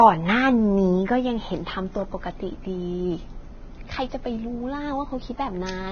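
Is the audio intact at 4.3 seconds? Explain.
No, not really. At 4.3 seconds the speech carries the same damage it has from start to finish, which sounds like heavy Vorbis compression at a low bitrate, likely somewhere near 18 kbps. Nothing is left above 6.5 kHz, and the treble just below that sounds hissy and grainy because fine detail has been quantised into noise of similar energy. Consonant attacks come across blurred and the tone has a roughened edge.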